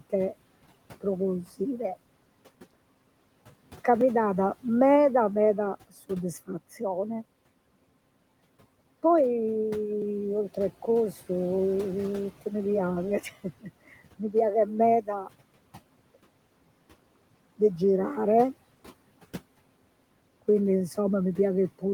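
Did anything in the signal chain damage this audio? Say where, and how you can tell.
Yes. Speech cut by the noise suppressor (call processing) at 14.65–14.79 s and 15.01–15.29 s: the suppressor mistook soft speech for background and attenuated it, by about 9 dB and then about 18 dB, so those stretches sound swallowed against room noise about 21 dB down.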